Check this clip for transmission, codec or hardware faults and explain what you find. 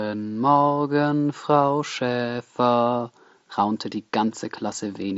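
Nothing's wrong here: the speech comes through the Bluetooth mSBC headset link with the usual wideband ceiling of around 8 kHz, and no dropouts, glitches or other transmission or hardware trouble turn up anywhere in it.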